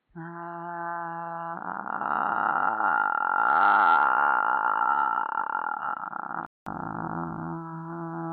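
An everyday-sound recording whose first 6.66 s come through what is likely an input switched to a poorer device: nothing above 4.3 kHz, a dull, boxy tone, and a faint noise floor well below the sound. At 6.66 s a 200 ms silence falls, then full bandwidth returns at about the same level. That abrupt gap-then-restore, with tone and noise changing together, separates a device switch from a steady low-pass filter or codec bandwidth limit.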